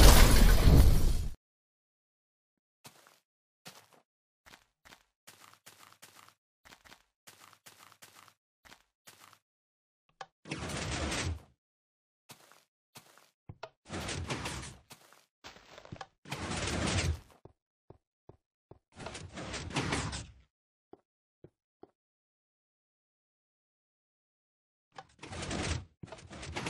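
From 24.11 s to the end at 26.69 s there's a time-stretched section: the pace jumps to about 1.51× while the pitch holds, sounding rushed, likely from software squeezing it to fit.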